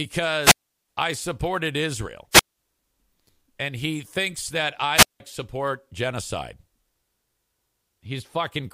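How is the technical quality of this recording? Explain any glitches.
The speech is interrupted three times by wireless microphone squelch dropouts, at 0.41–0.88 s, 2.31–2.58 s and 4.94–5.20 s. Each time the FM signal fades, hiss rises, and the receiver's squelch mutes the output for about 370, 190 and 175 ms before the speech returns.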